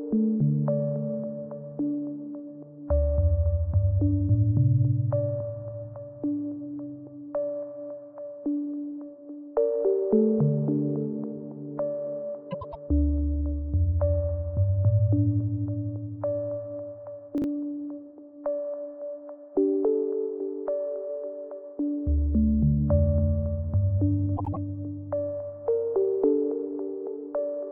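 At 12.51 s the sound breaks into a brief garbled flutter lasting about a quarter of a second, ending at 12.76 s. This is frames out of order. Two neighbouring blocks of about 104.5 ms each were decoded in swapped order, which fits two runs of four frames. The stretch plays its second half first. No time is lost, but there are three hard joins.

At 17.38 s there is a tiny jumbled hiccup that is over by 17.44 s. It comes from chunks out of order. A single 20 ms chunk of audio was placed two chunks later than it belonged, so it plays after the material that should have followed it. Everything is still present and the timing is unchanged. The jumble is the reordering itself, which creates three abrupt seams.

At 24.37 s the same swapped-frame flutter returns, shorter this time, running to 24.57 s. This is frames out of order again, now with two adjacent blocks of about 78.4 ms each exchanged, which points to runs of three frames. 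The two halves play in reverse sequence with nothing lost.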